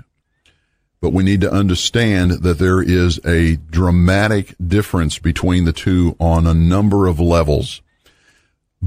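Speech runs throughout, with regular ticks at 10 per second, but only while sound is present. The resampler restarted on every block. Each 100 ms block was converted from 48 kHz to 44.1 kHz separately, leaving an error at every edge.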